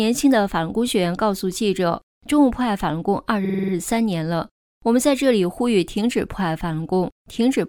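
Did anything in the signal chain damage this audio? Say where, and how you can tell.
Yes. Between 3.44 and 3.72 s there's a stutter: a 46.4 ms chunk plays seven times in a row. That's repeated frames. A run of compressed frames got written or sent more than once, so the decoder dutifully plays the same slice over, which fits a two-frame block. The repeats stretch the audio by about 279 ms. I'd look at the codec/storage stage.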